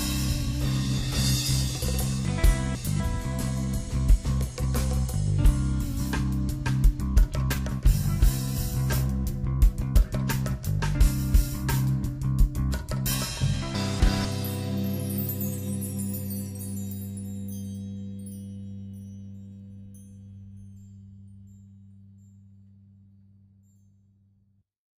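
Audio chunks of 250 ms were delivered out of order twice, so a delayed chunk plays after later ones. Between 2.25 and 3.0 s it is two chunks late, and between 13.75 and 14.25 s one chunk late. Each spot sounds jumbled, with three hard joins.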